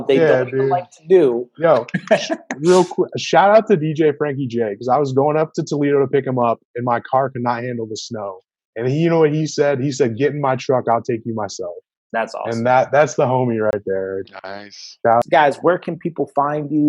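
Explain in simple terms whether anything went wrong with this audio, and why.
Just after 13.7 seconds, from 13.71 to 13.73 s, the sound drops out for about 23 milliseconds. This is a block of digital silence: a short run of samples replaced by zeros, probably because the output buffer wasn't filled in time. The abrupt cut in and out makes a brief click or tiny hole.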